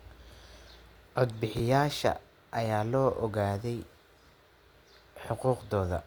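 At about 1.57 to 1.6 s there's a brief jumble: chunks out of order. One 10 ms chunk of speech turned up two chunks late and played after the ones meant to follow it. Nothing's missing, but there are three hard joins and the order's scrambled.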